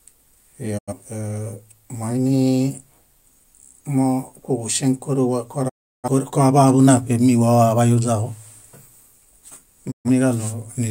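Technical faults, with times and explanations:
0.77–0.93 s, 5.68–6.08 s (between "moinimokuġuŝeŋ kóruwa" and "koaḃaḃu náṗemi wawaḃayuźaġo"), 9.90–10.10 s: digital broadcast dropout. The receiver muted on failed frames, so the speech fades out over about 20 ms into silent gaps, seen as flat waveform and blank spectrogram columns.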